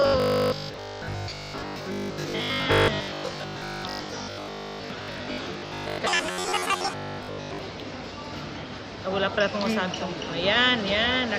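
The audio has robotic sound from repeated short buffers from 0.02 to 7.61 s: a rigid 50 Hz buzz, likely from a 20 ms buffer being replayed while most of the real material is skipped. From 6.07 to 6.94 s a section plays at the wrong speed, 1.82 times too fast and around ten semitones high, likely from playback against a mismatched clock.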